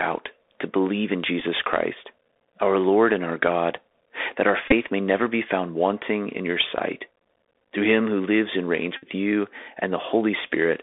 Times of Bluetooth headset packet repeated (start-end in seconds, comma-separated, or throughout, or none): 1.40, 4.68-4.73, 8.97-9.06